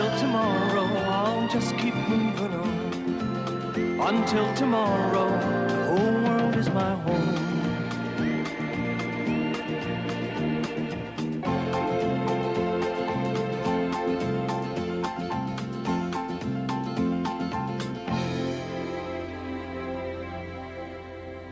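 No technical faults can be heard anywhere in this recording.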